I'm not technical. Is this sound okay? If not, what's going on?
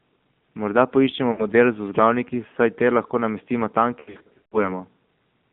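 No. The whole recording went through the AMR narrowband mobile codec, the speech compression used on older mobile calls. It keeps only a narrow slice of sound, roughly 150 Hz to 3.6 kHz. Anything brighter or deeper is gone. The voice also sounds clearly buzzy and artificial, because it was rebuilt from a rough model rather than stored as it was.

There are also lost AMR speech frames. These are small chunks of the call that the phone network failed to deliver. The decoder patched each gap by repeating the last sound and letting it fade. At 1.32 to 1.46 s, just before "model z vzglavniki saj", there is a short dip or wobble. Right after "namestimo tam", from 4.0 to 4.72 s, the gaps come in a cluster. The longest gap is 0.14 s. The sound stutters and smears there, then returns rough.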